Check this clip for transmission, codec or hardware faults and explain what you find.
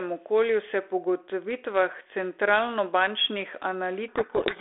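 One fault: a codec payload misread from 4.08 s to the end. From that point the receiver unpacks the G.726 code words with their bit order reversed, so each sample's prediction difference is decoded as the wrong value. The speech sinks under harsh, rasping distortion, audible inside the telephone band of about 300 Hz to 3.5 kHz, whose light coding noise fits G.726 at 32 kbit/s.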